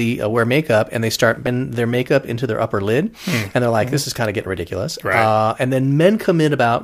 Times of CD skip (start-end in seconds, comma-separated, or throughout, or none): 1.46